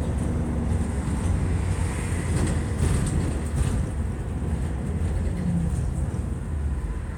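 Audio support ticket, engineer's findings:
Engineer's findings: no audio fault found in this recording of sounds.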